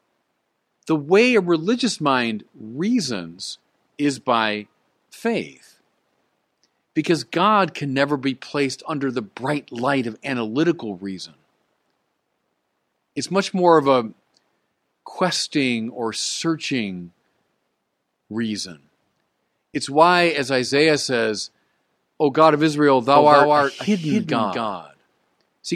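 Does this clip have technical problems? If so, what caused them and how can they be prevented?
Yes. From 23.16 s to the end, the speech has a doubled audio track: a second full-band copy runs about a fifth of a second behind and a few decibels quieter. Unlike an echo, it begins abruptly, with no decay or room colouring. It is likely caused by the audio being captured twice, once through a slower path. Prevent it by routing each source through only one capture or monitoring path.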